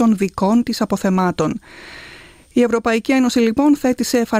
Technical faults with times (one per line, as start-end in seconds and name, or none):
none